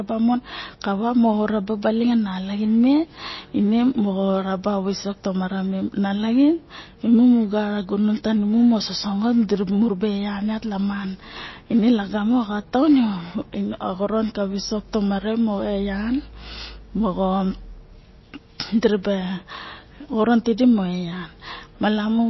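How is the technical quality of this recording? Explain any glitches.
The recording is noticeably degraded from start to finish. The speech sounds watery and swirly, with metallic chirping on s sounds, softened consonant attacks, and nothing at all above about 5.8 kHz. These are plainly audible MP3 compression artefacts, likely from a very low bitrate, around 24 kbps. Starved of bits, the encoder cut the treble at a fixed point and kept dropping weak frequency components in and out between frames, which produces the shimmering, underwater texture.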